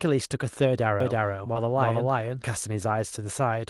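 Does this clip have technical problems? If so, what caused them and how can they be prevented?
Yes. From 1.00 s to 2.46 s a doubled audio track runs under the speech: a second full-band copy at roughly the same level trails by about 300 ms, with no reverberant tail, and it switches on and off abruptly. The likely cause is the same signal reaching the mix twice, through a slower monitoring path or misaligned edit layers. On a spectrogram every syllable pattern repeats about 0.3 s later; the waveform shows overlapping envelopes. Prevent it by routing only one path to the mix and aligning edits.

Between 1.53 s and 1.57 s there is short concealed packet loss. About 20 ms of audio arrived too late for the decoder, and roughly 17 ms of it was filled by extending the preceding sound before cross-fading back, which is heard as a brief smear or wobble. A spectrogram shows a short stretch of smoothed, repeated harmonics or shaped noise with a soft seam on each side, and the waveform shows a looped-looking segment. 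Prevent it with a steadier network connection, a larger jitter buffer or forward error correction.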